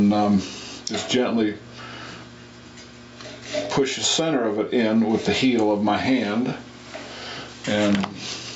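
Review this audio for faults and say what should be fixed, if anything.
Gain pumping runs throughout the clip: the level is pulled down on each loud sound and climbs back afterwards, swinging by around 15 dB, which squashes loud and soft parts together. This likely comes from input gain set far too high, driving a fast limiter or compressor. The band stops at 8 kHz, as expected from call microphone processing.

To prevent it, lower the microphone input gain so that loud sounds no longer push the limiter or compressor into constant action.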